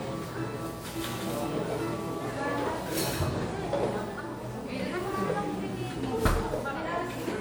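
From the first moment to the last, a steady USB whine sits under the sound at 1 kHz, strongest at that fundamental and roughly 40 dB below the signal. The USB bus pulls current in 1 ms frames, and that periodic draw leaks into the audio through the power or ground path, giving a fixed-pitch tone. On a spectrogram it appears as a thin, unbroken horizontal line at 1 kHz spanning the whole clip. In the waveform it is buried in the louder material.

Also running the full length, the everyday sound has a swirly, smeared, hollow quality, and its attacks are blurred. This is generation loss, likely from repeated lossy decoding and re-encoding, around ten passes, with a character that points to a WMA codec at about 96 kbit/s. Each pass requantises on a shifted frame grid, so the noise and holes accumulate. A spectrogram shows patchy, flickering gaps across the upper bands, with content ending near 20.1 kHz, and transients smeared in time.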